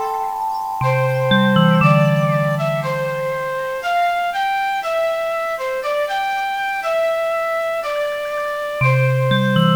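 A constant, even hiss runs from start to finish, sitting about 30 dB below the signal, with no grit or distortion. This is low bit depth with dither: noise added before rounding turns the coarse quantisation error, which fits 8-bit samples, into steady white noise.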